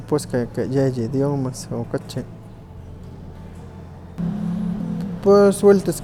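A short speech recording with nothing technically wrong that can be heard in it.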